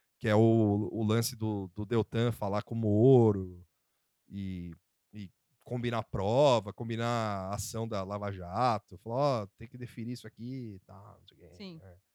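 No technical faults are audible anywhere in the speech recording.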